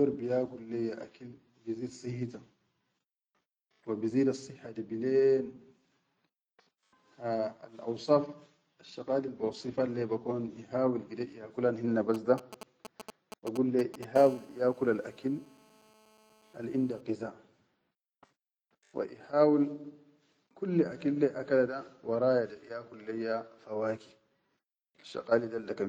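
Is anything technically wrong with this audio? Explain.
Yes, a nearby 2G phone is leaking into the recording.

From 12.14 to 14.05 s there are GSM signalling bursts: a galloping dit-dit-dit of short 217 Hz buzzes, fairly loud, as the circuit rectifies the phone's brief radio bursts.

From 14.16 to 17.01 s it becomes a steady GSM phone buzz, a raspy 217 Hz tone full of harmonics at about 26 dB below the speech, as the circuit rectifies the phone's in-call transmission bursts, 217 a second.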